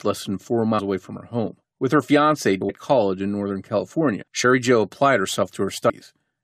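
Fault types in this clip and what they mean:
compressed frames skipped: runs of coded frames go undecoded, so the speech jumps ahead by roughly 100 to 150 ms four times, fitting multiples of a 23.2 ms frame. Each join shows as a sudden envelope shift and a narrow vertical seam.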